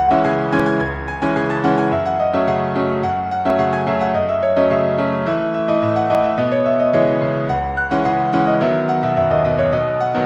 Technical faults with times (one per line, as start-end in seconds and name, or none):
0.60 dropped buffer (overrun)
3.50 dropped buffer (overrun)
6.15 dropped buffer (overrun)